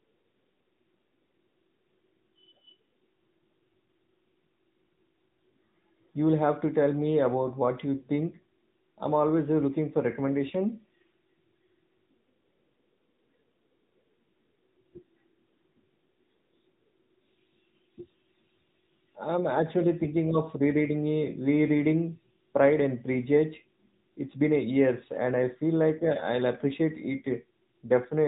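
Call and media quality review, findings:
AMR narrowband mobile codec, entire clip. Speech band-limited, nothing above 3.8 kHz, so the spectrogram shows a hard flat ceiling with an empty band above. Plainly audible buzzy, synthetic texture from the pulse-driven vocal-tract model. Sound fits a 10.2 kbps AMR-NB mode.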